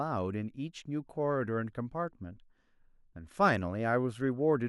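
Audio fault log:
No fault can be heard anywhere in this speech recording. Nothing in it calls for an entry in the log.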